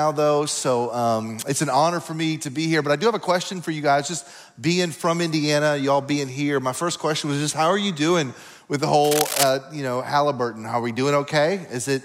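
Cable scratch noise runs from 9.04 to 9.50 s, a burst of dense, uneven scratching laid over the sound at nearly the same loudness. This likely comes from a worn cable, connector or control being moved, its contact resistance jumping rapidly for about half a second.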